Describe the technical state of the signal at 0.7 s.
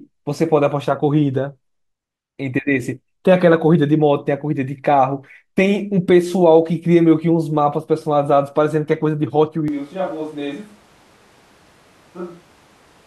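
At 0.7 s the signal is intact, with no dropout, distortion, glitch or other fault audible at that moment.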